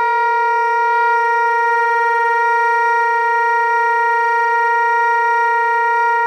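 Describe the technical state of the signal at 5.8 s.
Nothing is wrong with the signal at 5.8 s; the everyday sound there comes through intact, with no audible fault.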